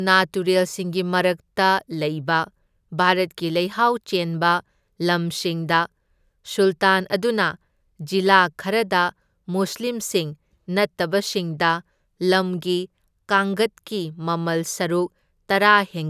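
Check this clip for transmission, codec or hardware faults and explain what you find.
No faults found in this clip.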